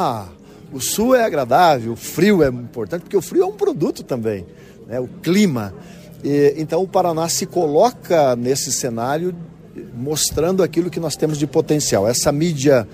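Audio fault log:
Nothing stood out on listening.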